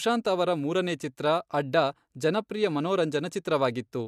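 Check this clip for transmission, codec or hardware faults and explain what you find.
No faults found in this recording.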